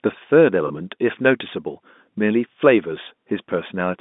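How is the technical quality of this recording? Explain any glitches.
One brief glitch stands out against the narrow telephone band of the G.711 coding. At 0.68 to 0.70 s, packet loss with pitch repetition: about 20 ms went missing, which fits a single lost packet. The receiver refilled it by repeating the last pitch period, giving a momentary held, buzzy smear rather than the silent gap or click of a plain dropout.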